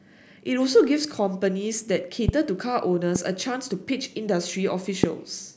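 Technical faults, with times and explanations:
2.29–2.31 s, 3.16–3.18 s and 5.04–5.06 s: loud pop. Three separate sharp pops, each lasting about 24 ms, jump roughly 15 to 25 dB above the speech, with the last one the strongest. Each is likely a sudden voltage pulse, such as static or a switching or driver glitch, added to the signal, while the speech continues underneath. A waveform shows three tall, narrow spikes, and a spectrogram shows thin vertical lines spanning all frequencies.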